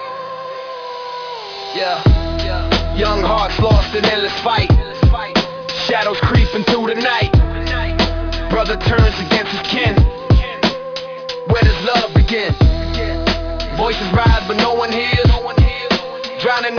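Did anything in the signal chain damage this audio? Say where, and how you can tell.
Yes, at a sample-rate conversion stage: the audio was downsampled without an anti-aliasing filter, which fits a drop to about 11 kHz. Throughout the clip, content above 5.5 kHz folds back as unrelated, gritty, metallic tones roughly 15 dB below the signal.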